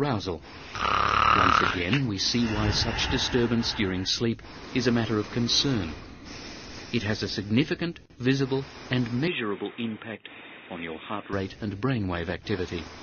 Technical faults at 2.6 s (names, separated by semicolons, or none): none